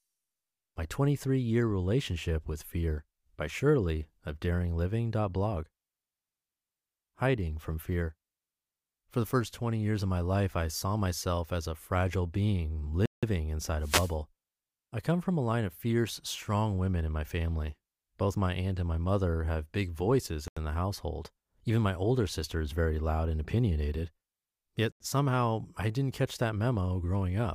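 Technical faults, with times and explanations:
13.06 to 13.23 s, 20.48 to 20.57 s and 24.92 to 25.00 s, block of digital silence: the speech cuts to dead silence with no fade, for 171 ms the first time and 85 ms the other two. The output buffer went unfilled, which fits blocks of 8192 and 4096 samples.
13.80 to 14.15 s, wireless microphone noise hit: a burst of hissing static swishes over the speech for about a third of a second. The FM radio link faded as reflected signals cancelled, so receiver noise rose and covered the voice.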